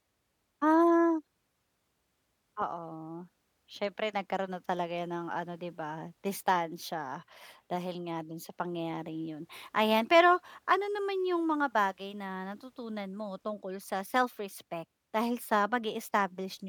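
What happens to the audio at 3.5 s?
Nothing goes wrong at 3.5 s; the speech runs through that moment intact, with no dropout, click or other audible fault.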